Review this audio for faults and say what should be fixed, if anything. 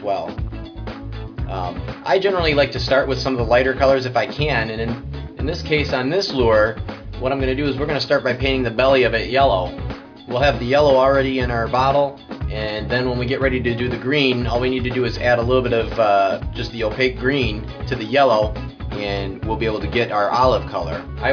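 Nothing in this audio needs fixing, as no faults can be heard.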